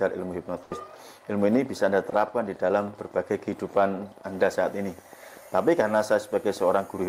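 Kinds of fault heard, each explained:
Burst of packet loss: Around 0.63 to 0.78 s, about 80 ms of audio never arrives. The receiver stretches the last sound across the gap as a fading buzz or hiss. On a spectrogram, frozen, dimming bands give way to an abrupt jump where audio resumes.
Train of clicks: From 1.57 s to the end, sharp ticks arrive about 13 times per second at an uneven pace, peaking about level with the sound itself. This is likely interference or a faulty connection or power supply. The waveform shows narrow spikes, and the spectrogram thin vertical lines.
Short concealed packet loss: At about 2.10 to 2.14 s, roughly 20 ms goes missing. The decoder patches it by extending the preceding sound, then blends back, which is heard as a brief smear or wobble. A spectrogram shows a short, slightly blurred, smoothed patch.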